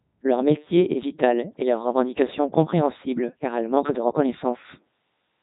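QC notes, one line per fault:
Throughout, Codec 2 vocoder: the speech is rebuilt from pitch, voicing, energy and a coarse spectral envelope rather than carried as a waveform, so it comes out robotic and buzzy, with heavy damage that fits Codec 2's top rate of about 3.2 kbit/s. On a spectrogram, harmonics look unnaturally regular and smeared, with nothing above 3.8 kHz; the waveform loses its original shape, showing clean synthetic periodicity instead of natural irregular cycles.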